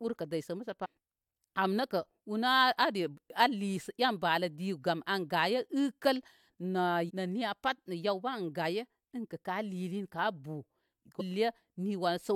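Speech, marked by three brief glitches from damaged data in a compressed stream. They fall at 0.84–0.86 s, 7.08–7.11 s and 11.19–11.22 s. Each lasts a little over 20 ms and sounds like a short chirp or blip. At each point, some bytes of the encoded stream arrived wrong. The decoder misread those frames, lost sync, and hunted for the next valid frame header before playback recovered.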